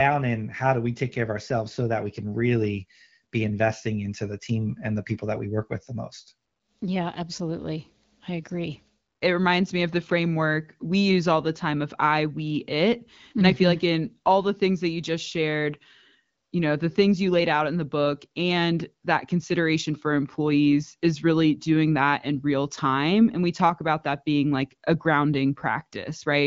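No technical faults occur in this speech, which is carried by an AMR wideband (HD Voice) codec at 12.65 kbit/s with nothing above 7.5 kHz.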